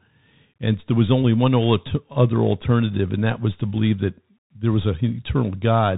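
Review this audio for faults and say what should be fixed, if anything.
The speech runs through a Bluetooth CVSD headset codec for its whole length. Nothing above about 3.8 kHz survives, so it sounds boxed-in and narrowband. The codec's one-bit up/down steps, consistent with a 64 kbps CVSD link, leave a granular hiss beneath the speech and scratchy, distorted sibilants where the adaptive step can't keep up. That grainy texture distinguishes it from a clean low-pass filter or wideband mSBC, which would be smooth or extend further. To prevent it, record through a wideband or wired microphone path rather than the headset's hands-free profile.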